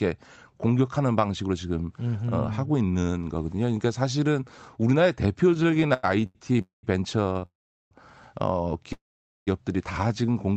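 From 5.51 to 6.61 s the speech drags and stutters through seventeen brief holds, the longest 94 ms, filling about a third of that stretch. These are repeated stalls (stutter): packets kept arriving late, so the jitter buffer kept running dry and the last sound was extended each time.

At 6.61 to 6.85 s the sound fades into a short buzz and then goes quiet for about 140 ms before resuming where it left off. This is a call audio freeze, likely from packets held up in transit that emptied the jitter buffer, adding a 217 ms gap.

At 7.33 to 7.37 s and again at 7.39 to 7.43 s, a sound is held too long with a faint buzzy dip, about 20 ms each. These are short stalls from a late packet: the receiver stretched the last sound until the packet arrived.

Two more freezes follow. From 7.45 to 7.93 s there is a fading tail and then about 390 ms of silence, 456 ms in all. From 8.93 to 9.49 s the same happens with about 470 ms of silence, 538 ms in all. 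In each case the audio picks up exactly where it stopped.

From 10.07 to 10.43 s the speech runs slower at an unchanged pitch, at about 87% speed, with drawn-out sounds. This is a jitter buffer slow-down: the receiver repeated pitch periods to rebuild its reserve, adding 54 ms. Throughout the clip, the Opus call path limits the audio to about 8 kHz.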